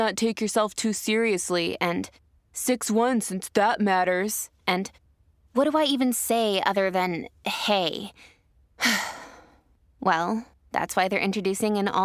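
No technical faults can be heard anywhere in the recording.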